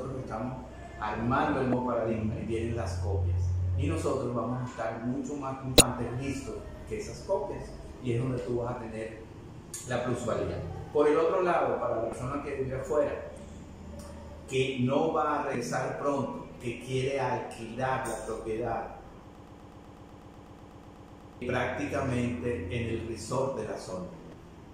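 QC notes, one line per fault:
1.70–1.73, 5.78–5.81, 12.10–12.13, 15.52–15.55 and 24.30–24.33 s, damaged data in a compressed stream: short blips where corrupted frames threw the decoder off until it resynced.
19.35–21.42 s, broken-record loop: a 124 ms slice repeats 17 times back to back, likely a stalled stream resending its last fragment, so the real audio there is gone.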